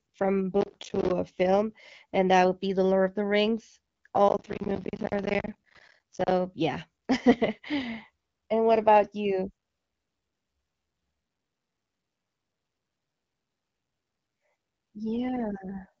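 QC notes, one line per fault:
0.61–1.11 s and 4.29–6.31 s, processor overload crackle: two bursts of gritty, tearing crackle over the speech, the second lasting about 2 s. Processing deadlines were missed in a row, and each missed buffer dropped to silence, leaving many hard-edged gaps. The gaps fall about every 17–20 ms, each about 10 ms long, which fits a buffer of around 10 ms. That rapid spacing is why the gaps merge into crackle rather than separate clicks, and it stops once the load clears.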